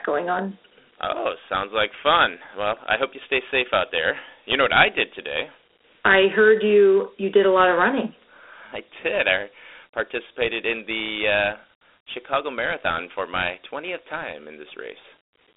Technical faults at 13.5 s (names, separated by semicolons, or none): Dialogic VOX ADPCM